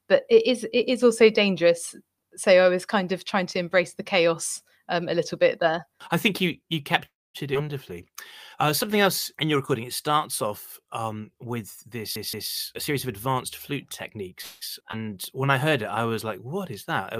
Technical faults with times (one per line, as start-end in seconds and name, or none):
7.05-7.36 call audio freeze
7.54-7.57 skip ahead
7.93-10.86 jitter buffer slow-down
12.16-12.51 CD stuck on one turn
12.75-14.33 jitter buffer speed-up
14.41-14.63 call audio freeze
14.91-14.95 skip ahead
15.13-16.13 jitter buffer slow-down